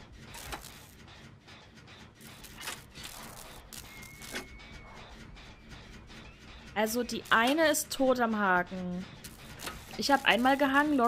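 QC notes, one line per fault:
No faults found anywhere in the clip.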